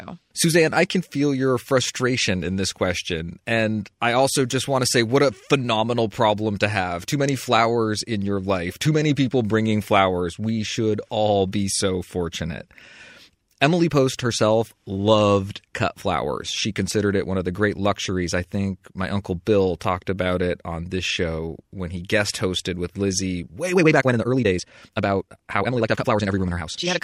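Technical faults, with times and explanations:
23.72 to 27.04 s, time-stretched section: the speech abruptly runs at twice its pace to the end while the pitch stays put. The likely cause is software squeezing this stretch by discarding short slices and splicing the rest together, which is why it sounds rushed. On a spectrogram the harmonics hold their spacing but syllable patterns compress horizontally; the waveform shows packed envelopes with small discontinuities at the splice points.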